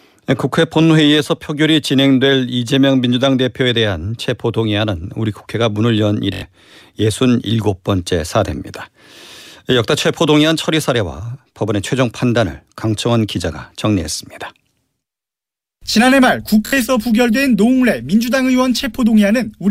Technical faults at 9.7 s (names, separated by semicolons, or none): none